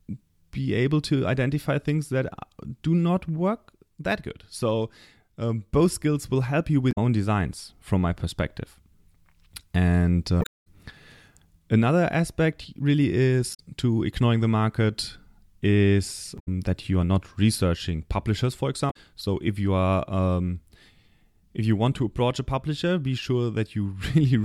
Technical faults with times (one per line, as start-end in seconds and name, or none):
6.88-6.98 damaged data in a compressed stream
10.39-10.67 damaged data in a compressed stream
13.50-13.60 damaged data in a compressed stream
16.35-16.48 damaged data in a compressed stream
18.87-18.96 damaged data in a compressed stream